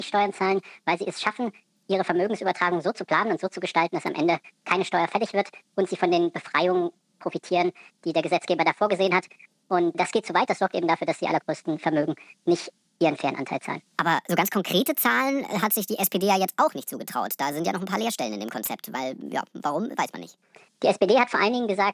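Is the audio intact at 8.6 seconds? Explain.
No. At 8.6 seconds, as through the whole clip, there is a wrong sample rate fault: the sound is played faster than it was captured, with no conversion, which fits 22 kHz material played at 32 kHz. Everything runs 1.45 times too fast and sits about 6.45 semitones high.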